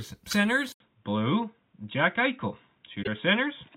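At 0.30 s, lasting about 30 ms, there is a brief glitch that is likely a broken MP3 bit reservoir. Frames were lost, and the next frame reached back into a neighbour's bytes for its data. Unlike a plain dropout, the sound jumps ahead and the first frames after the cut come out wrong. Its length fits one or two 26.1 ms frames.

From 0.72 s, after an 80 ms silence, the sound turns dull for the rest of the clip. Nothing is left above 3.8 kHz, and a new noise floor sits roughly 50 dB down. This is likely the input switched to a poorer device. Because the loudness stays the same, it is a change of band and character rather than a gain jump.

At 3.02 to 3.08 s what is likely the same reservoir glitch returns, about two frames long.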